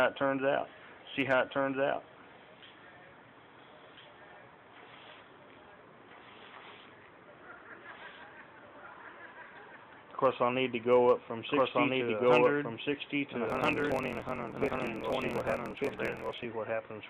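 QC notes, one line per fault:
Throughout: doubled audio track. A second capture path or an edit likely holds a second copy of the audio out of step. That copy trails by roughly 1.5 s at about the same level, full-band and dry, with no decay or room colour, so every event repeats flatly.
13.45–16.47 s: block size mismatch (truncated). An upstream stage writes longer blocks than the next stage reads, which fits 1024-sample reads, and each block's tail is discarded. This leaves a 43.1 Hz buzz at the block rate, and the sound runs 1.12 times fast at near-normal pitch.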